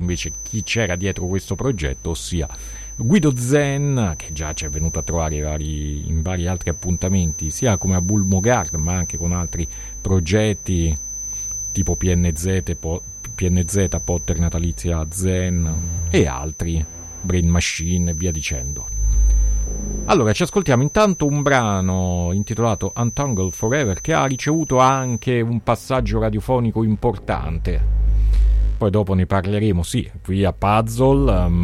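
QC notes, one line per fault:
0.00–25.31 s, feedback whistle: thin 6.1 kHz tone that slowly swells and fades, roughly 15 dB under the sound, likely a loudspeaker-to-microphone loop held near feedback; a flat horizontal spectrogram line.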